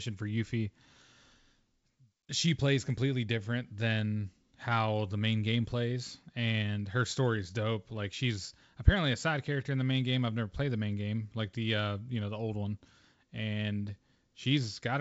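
Nothing goes wrong anywhere in this speech, which comes over G.722 wideband telephone coding at 64 kbit/s, and any trace the coding leaves is faint at most.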